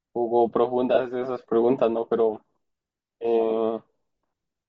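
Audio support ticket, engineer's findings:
Speech sounds grainy throughout, with a breathy hiss in the highs. Likely Bluetooth LC3 compression at a low bitrate, around 32 kbps. The codec drops upper spectrum and fills it with noise. Damage plainly audible.

Lost LE Audio frames at 0.94–0.99 s. Brief noisy smear, about 30 ms. Decoder repeated the last spectrum with scrambled signs. The length fits four 7.5 ms frames. Too short to fade fully into silence.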